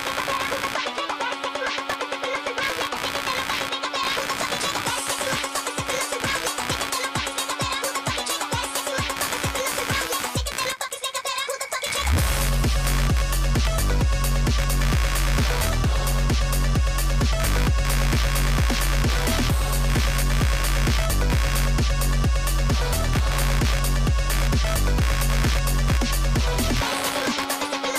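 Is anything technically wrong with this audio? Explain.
Yes. Computer activity noise runs throughout: a buzzing, chirping pulse at around 70 Hz, roughly 15 dB below the sound. Processor, graphics or mouse load shifts the shared ground under the audio circuit, so the noise tracks computer activity, not the audio.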